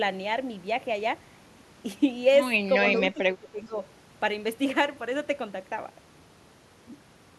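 Between 2.96 and 3.79 s the speech dips sharply, falling by around 15 dB at its deepest, for roughly half a second in total. This is speech suppressed in double talk. The likely cause is that both ends spoke at once, and the echo canceller, unable to tell this talker apart from the returning loudspeaker echo, attenuated everything it heard, taking the wanted speech down with the echo.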